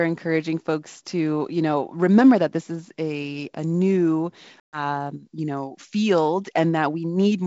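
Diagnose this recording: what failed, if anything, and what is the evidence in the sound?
The network stage failed, showing up as packet loss on an ADPCM call over a G.722 wideband link that otherwise sounds clean up to 7 kHz. Around 4.60 s the speech drops into a hard-edged hole of about 130 ms, roughly fifteen packets' worth, and the disturbance runs to about 4.84 s. The gap was filled with silence, so the decoder's adaptive predictor and step size lost track of the sender's. The speech comes back with a bit of grit, and settles over the next few tens of milliseconds.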